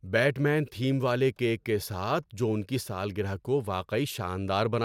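No technical faults can be heard anywhere in the speech recording; the signal stays continuous and steady throughout.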